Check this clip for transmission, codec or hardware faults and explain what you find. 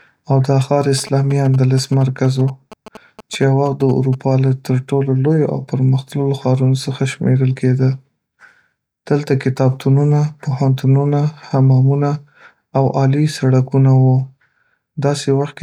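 There's one hardware-side fault in this speech clip. From 0.98 to 4.15 s, GSM signalling bursts from a nearby 2G phone get rectified by the audio circuit, giving a galloping dit-dit-dit of short 217 Hz buzzes, well below the speech.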